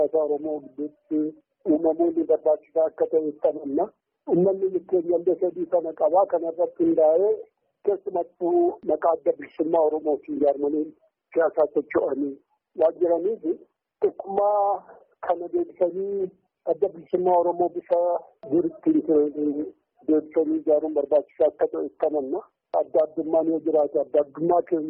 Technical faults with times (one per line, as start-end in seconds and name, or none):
none